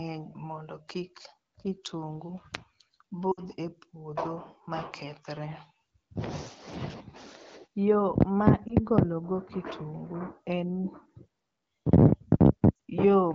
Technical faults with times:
3.32-3.41 lost AMR speech frames
8.68-8.74 lost AMR speech frames
12.75-12.79 lost AMR speech frames

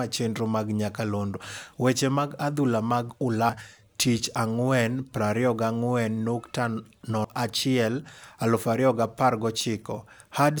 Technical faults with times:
3.49 audio missing between chunks
7.24 audio missing between chunks

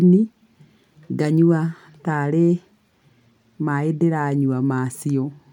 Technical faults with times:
none

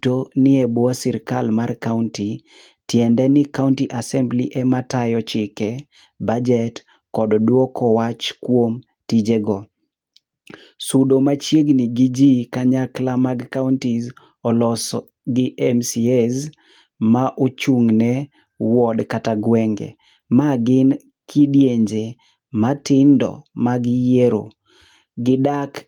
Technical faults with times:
none

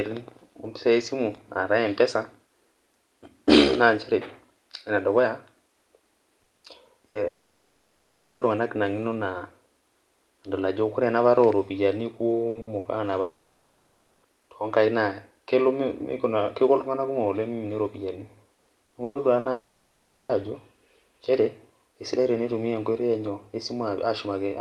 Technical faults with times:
6.43-7.18 repeated packet loss (robotic sound)
7.27-8.44 long network dropout
12.49-12.88 repeated packet loss (robotic sound)
13.21-14.26 long network dropout
18.55-19.48 repeated packet loss (robotic sound)
19.51-20.32 long network dropout

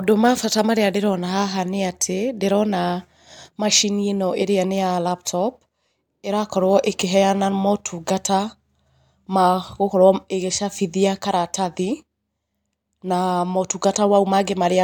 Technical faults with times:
none

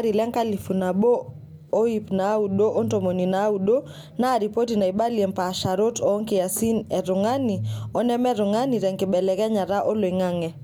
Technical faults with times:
none

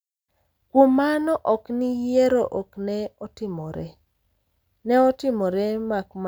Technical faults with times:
none

